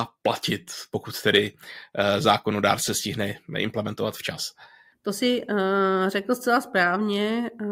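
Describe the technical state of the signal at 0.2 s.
At 0.2 s the speech signal is intact, with no audible dropout, distortion or other fault at that point.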